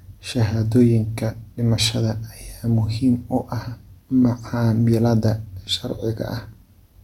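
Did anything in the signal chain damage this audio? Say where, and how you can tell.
No, nothing in the signal chain has left an audible mark on this speech recording, which holds steady in level and continuity with no stage of the path leaving any trace of damage.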